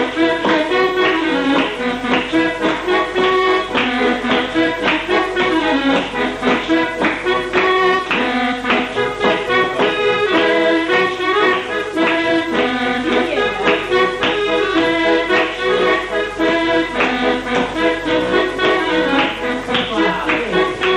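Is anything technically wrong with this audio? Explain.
No, nothing in the audio points to a technical problem.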